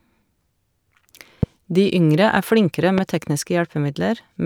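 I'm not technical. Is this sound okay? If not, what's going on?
No. A loud pop hits at 1.43–1.45 s and again at 2.98–3.00 s, each a sharp jump well above the speech, likely from a sudden electrical spike like a plug or switch.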